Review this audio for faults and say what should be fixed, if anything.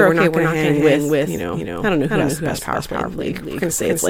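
The speech is most likely being captured twice, once directly and once through a slower path, so a doubled audio track runs through the whole clip. A second full-band copy trails the first by roughly 300 ms at about the same loudness, with no decay or room colour, so every syllable repeats as a flat, distinct echo rather than reverberation. To prevent it, route each source through a single capture path and mute any monitoring or loopback feed.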